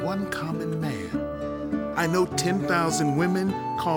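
Nothing technically wrong turns up here; the audio just runs its course without any trouble to point at.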